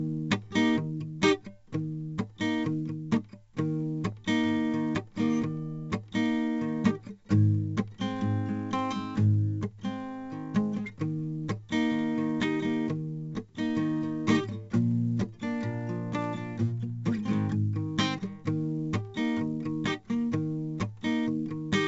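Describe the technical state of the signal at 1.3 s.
At 1.3 s the music carries 4-bit ADPCM compression, present across the whole clip. Each sample is coded as a coarse 4-bit step from a prediction, so a gritty hiss rides on loud passages. Attacks distort. Nothing survives above 7.8 kHz, which fits a 64 kbps stream.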